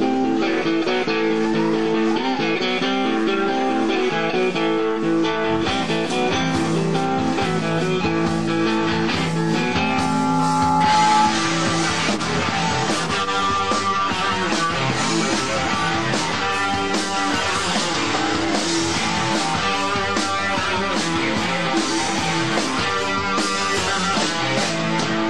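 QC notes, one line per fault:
8.78–11.47 s, loudspeaker feedback squeal: an 854 Hz tone swells over about two seconds to roughly 5 dB above the programme, as the mic-speaker loop gain exceeds unity.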